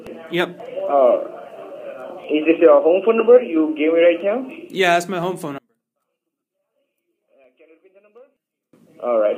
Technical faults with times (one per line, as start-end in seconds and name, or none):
0.60 dropped samples
2.24 dropped samples
4.20 dropped samples
5.23 dropped samples
5.58-8.73 one channel inverted
7.44 dropped samples